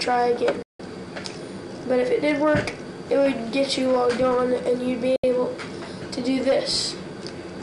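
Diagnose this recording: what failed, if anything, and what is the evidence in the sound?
The failure is a digital broadcast dropout at the reception and decoding stage. The audio mutes twice. The first hole runs from 0.62 to 0.80 s, about 168 ms. The second runs from 5.16 to 5.24 s, about 72 ms. Each edge fades in roughly 3 ms, so the cuts sound abrupt but not clicky. The receiver lost valid frames and muted until good ones arrived. The gap lengths fit whole frames of about 24 ms, seven then three. Whatever was sent during those holes is gone.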